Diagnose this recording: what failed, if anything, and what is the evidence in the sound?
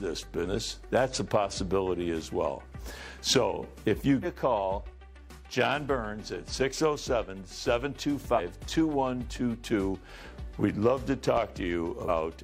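Damaged data in a compressed stream points to the codec or storage stage. Brief chirps, clicks or short holes occur at 0.41 to 0.47, 4.20 to 4.26, 8.34 to 8.40 and 12.05 to 12.10 s. Each lasts about 50 to 60 ms. The decoder misread corrupted frames and lost sync until the next frame header.

A loud pop sits at 11.37 to 11.41 s. It is one sharp pulse, about 10 dB above the sound, which carries on underneath. This points to the analogue wiring or driver stage. The likely cause is a switch, plug or static discharge adding a voltage step.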